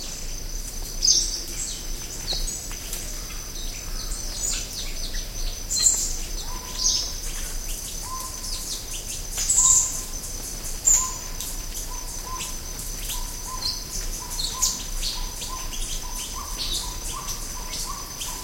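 No technical faults can be heard anywhere in this recording.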